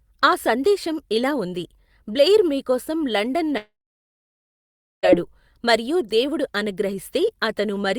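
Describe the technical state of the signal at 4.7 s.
At 4.7 s the speech is gone inside a long network dropout running from 3.57 to 5.05 s. Incoming audio likely stopped arriving. The last sound is extended briefly and fades. About 1.3 s of silence follows. The lost speech never returns.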